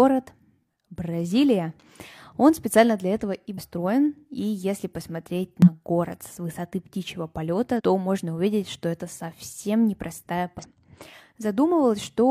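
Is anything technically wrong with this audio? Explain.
Yes. This speech clip has damaged data in a compressed stream at four points: 3.53–3.59 s, 5.62–5.68 s, 7.76–7.81 s and 10.59–10.65 s, each lasting about 50–60 ms. Corrupted bytes make the decoder misread frames and lose sync until it finds a valid header, producing a short chirp or squawk. On a spectrogram each appears as a brief, broadband smear or blocky patch breaking the speech harmonics; the waveform shows a sudden discontinuity or burst.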